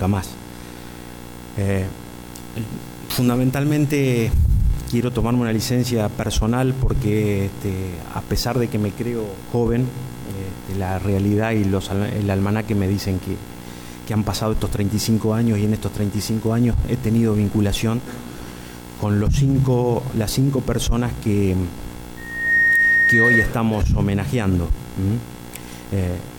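From 22.17 to 23.53 s there's loudspeaker feedback squeal: the mic catches its own speaker, and a 1.9 kHz tone swells within half a second to about 5 dB above the sound.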